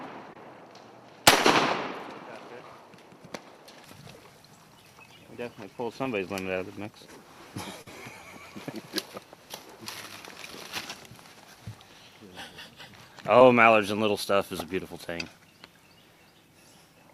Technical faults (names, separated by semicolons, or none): short concealed packet loss